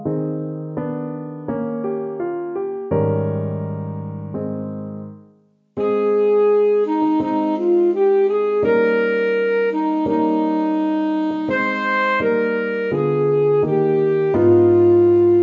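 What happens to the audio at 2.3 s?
Nothing goes wrong at 2.3 s: the audio is intact there, carried through the call's microphone processing, which trims the deepest bass and leaves nothing above 8 kHz, as expected for that path.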